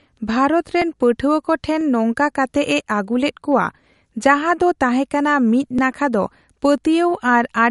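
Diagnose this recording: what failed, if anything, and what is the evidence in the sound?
The whole thing sits behind a codec stage, and it's likely MP3 compression. There's plainly audible coding damage throughout: nothing above 11.2 kHz, so the top end is sliced off flat, and the sibilants and fine detail have that watery, swirling quality you get when weak spectral lines drop in and out between frames. The damage fits a low bitrate, somewhere around 50 kbps, where the encoder sacrifices treble first.

Separately, there are tiny skips at 0.82, 1.81, 2.80, 4.79, 5.79 and 6.78 s, spaced about 1.0 s apart. It's likely audio missing between chunks, at the buffer or driver stage: each time a block closes and the next opens, a few milliseconds vanish and the two sides are butted together with no gap. You'll catch one just before "ᱯᱟᱹᱴᱷᱣᱟᱹ ᱠᱚ ᱴᱷᱮᱱ ᱱᱚᱝᱠᱟ", another between "ᱟᱹᱜᱩᱞᱮᱫ ᱠᱚᱣᱟ ᱡᱟᱦᱟ ᱫᱚ" and "ᱛᱟᱦᱮ ᱠᱟᱱᱟ ᱢᱤᱫ ᱱᱟᱠᱷᱟ", and one right after "ᱠᱟᱱᱟ ᱢᱤᱫ ᱱᱟᱠᱷᱟ ᱫᱚ".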